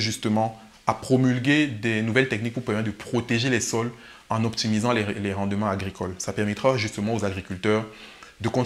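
Listening closely from beginning to end, nothing in the audio stood out as a technical fault.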